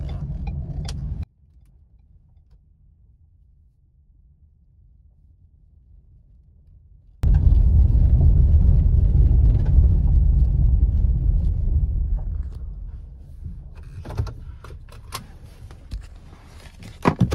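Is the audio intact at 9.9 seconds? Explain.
Yes, at 9.9 seconds the audio plays through intact, with no dropout, click, distortion or other break.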